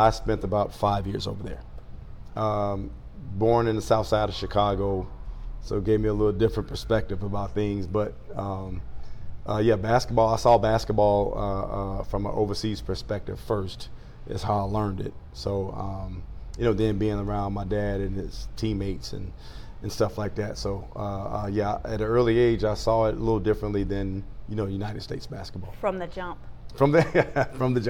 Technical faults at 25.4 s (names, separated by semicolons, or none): none